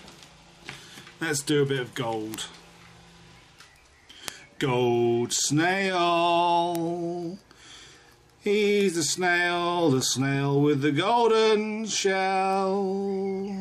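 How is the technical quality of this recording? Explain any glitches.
Five bit error spikes mar the recording, at 2.34, 4.28, 6.75, 8.81 and 12.53 s. Flipped bits in storage or on a digital link corrupted a sample or a few adjacent ones. Each heard as an abrupt, broadband tick unrelated to the sound. The first three peak near about -4 dBFS, the last two quieter, about -16 and -22 dBFS.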